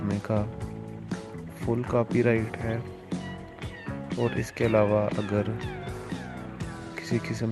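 No technical faults can be heard anywhere in this audio.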